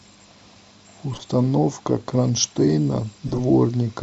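Twice the decoder accepted compressed frames whose bits had been flipped and played them anyway: a corrupt frame decoded, once from 1.13 to 1.22 s across a few frames, and again from 3.27 to 3.40 s across around seven. Misread codes and wrong gains push energy to the wrong frequencies, so each stretch comes out as a brief glitch, a chirp, squeak, blip or burst of noise, lasting only as long as the damaged frames.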